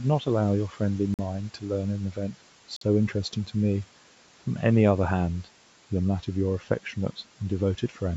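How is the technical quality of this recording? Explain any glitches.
The speech has two kinds of glitch: passages dipped by the noise suppressor, and two brief dropouts. The suppressor mistook speech for noise at 0.69 to 0.81 s, 1.40 to 1.70 s and 1.98 to 2.36 s. It turned those stretches down by about 8 to 12 dB, so they sound faint or swallowed. At 1.14 s and 2.76 s the sound cuts to silence for 47 ms and 49 ms, then resumes. The likely cause is a Bluetooth stall, where delayed packets let the headphone buffer run dry. Room noise sits about 23 dB below the speech, and the call microphone processing leaves nothing above 8 kHz.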